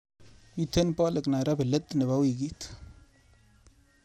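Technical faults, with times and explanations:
Throughout, MP2 compression: the speech sounds dull, with a gurgling, granular edge and nothing above 16.7 kHz. This is likely from MPEG Layer II coding at a rate fitting about 80 kbps, where starved upper sub-bands drop out and the remaining bands are coarsely quantised.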